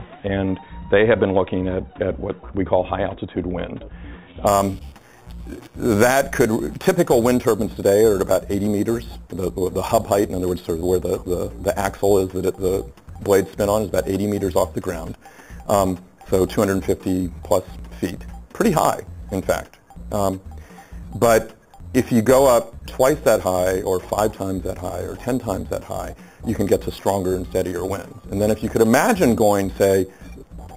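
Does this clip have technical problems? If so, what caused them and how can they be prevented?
Yes. From 4.47 s to the end, a metallic fizz follows the sound, with mirror images from 4 kHz to 8 kHz at about 18 dB below the signal. This is imaging from sample-and-hold upsampling, consistent with an 8 kHz source raised to 48 kHz by repeating samples. To prevent it, upsample with a proper interpolation low-pass filter.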